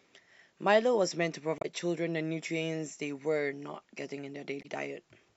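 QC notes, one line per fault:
1.58 to 1.65 s and 4.59 to 4.65 s, damaged data in a compressed stream: two brief glitches, each about 70 ms, break through the speech. Corrupted bytes there make the decoder misread those frames and lose sync until it finds a valid frame header.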